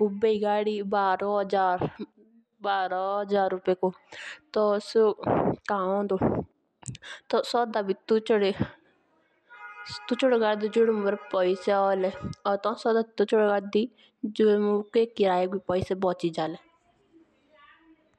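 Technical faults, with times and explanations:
No technical faults detected anywhere in the speech audio.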